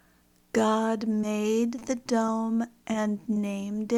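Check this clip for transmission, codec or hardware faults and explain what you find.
The clip has one transmission fault, repeated five times.

Short concealed packet loss at 1.21–1.25, 1.79–1.83, 2.27–2.30, 2.92–2.96 and 3.34–3.38 s: each time about 20 ms of audio arrived too late. The decoder extended the preceding sound for 11 to 20 ms, then crossfaded back, leaving a brief smear or wobble.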